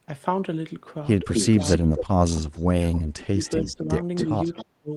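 Speech with two recurring faults. Echo leak is heard at 1.34–2.63 s, 3.44–3.75 s and 4.16–4.65 s. A delayed copy trails the talker by about 0.26–0.27 s, at about 5, 15 and 10 dB below the speech. This is likely a far-end echo canceller letting loudspeaker pickup through. Speech suppressed in double talk occurs at 1.83–1.88 s, 2.92–3.90 s and 4.26–4.92 s. The voice dips by roughly 20 dB, then 30 dB. The likely cause is the canceller muting the talker while both sides speak at once.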